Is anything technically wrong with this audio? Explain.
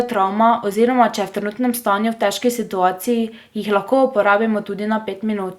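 No, nothing is technically wrong with this speech clip. No fault can be heard anywhere in the recording.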